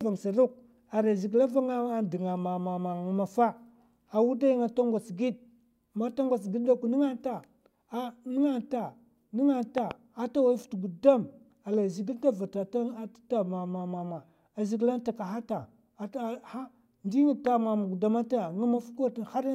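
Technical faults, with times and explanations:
9.78–9.93 s, loud pop: a double pop well above the speech just before "ata wai", likely a voltage pulse from a plug or switch; the speech continues underneath, not cut.
17.47–17.49 s, loud pop: a single short thump a little above the speech level, likely a brief electrical pulse; no gap follows, unlike a dropout.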